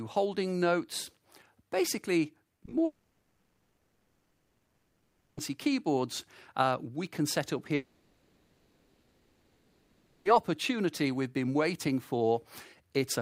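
From 2.47 to 2.73 s the audio breaks up with repeated packet loss, giving a choppy, robotic sound. Four short holes, none longer than 40 ms, totalling about 100 ms, are each patched by repeating the last bit of sound, so roughly 38% of that quarter-second is filler. On a waveform this shows as brief repeated or smoothed segments interrupting the signal. On a spectrogram it appears as short smeared blocks where the harmonic detail stops changing.

At 2.85 s the sound gives way to a stretch with nothing new, most likely a long network dropout, until 5.39 s. For about 2.5 s the receiver extends the last sound in place of the missing audio, and the final 0.21 s of the gap is silent before the audio resumes, with that whole stretch lost. A second stretch that is likely a dropout of the same kind runs from 7.75 to 10.27 s, again about 2.5 s, but here the filler runs right up to the restart with no silent portion. 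On a spectrogram each appears as a long band of frozen, featureless energy, with the first ending in a blank strip. On a waveform each is a fading, repetitive envelope, and the first one drops to near nothing just before the audio returns.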